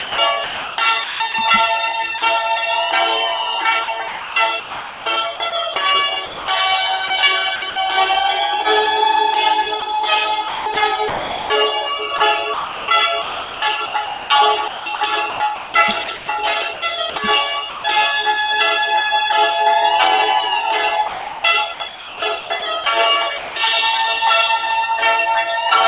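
Right from the start, 0 to 1.34 s, the sound is chopped: about 0.7 s in total gives way to smooth synthetic noise in several holes. It's likely sound chopped by the voice detector, the sender's detector flipping between sending and not sending and the receiver filling the gaps with comfort noise.

At 2.18 s there's a single 40 ms dropout, where the sound is briefly swapped for that same steady comfort noise before it picks up again. This is likely sound dropped by the voice detector, the sender mistaking a quiet moment for background and pausing transmission until it triggered again.

The chopping comes back three more times. Between 3.84 and 7.76 s about 1.2 s is filled in. From 9.8 to 17.84 s about 2.7 s goes, the most of any stretch. From 21.08 to 23.56 s about 1.1 s is lost. In each stretch you hear the same pattern of the sound cutting to synthetic noise and returning, likely the same detector switching on and off repeatedly. 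All of this sits on a G.711 mu-law call path, which explains why nothing comes through above 4 kHz.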